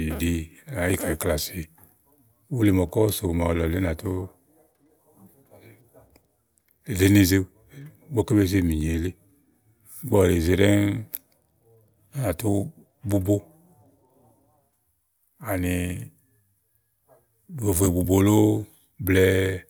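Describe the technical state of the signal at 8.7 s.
At 8.7 s the speech signal is intact, with no audible technical fault at that moment.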